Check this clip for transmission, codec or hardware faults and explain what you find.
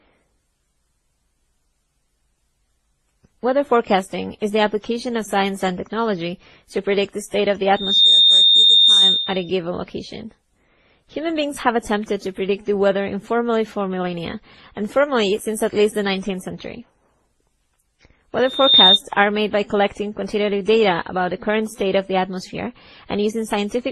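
Two faults are present in this speech clip: a layered codec smear throughout and two bursts of feedback squeal.

Throughout, the speech sounds dull and grainy, with nothing above 12.2 kHz and several kinds of swirling, watery artefacts stacked together. This is likely transcoding between lossy codecs. A low-bitrate encoding was re-encoded once or twice more, each stage adding its own damage and keeping the lowest cut-off.

From 7.74 to 9.5 s and again from 18.44 to 19.0 s, a piercing 3.6 kHz tone swells up over about a third of a second to roughly 10 dB above the speech. This is loudspeaker feedback squeal. The microphone picked up its own loudspeaker, and that frequency's loop gain exceeded one, so it grew until limited.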